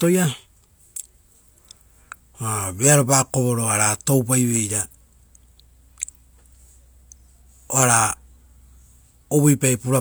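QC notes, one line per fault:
No faults found for these QC notes.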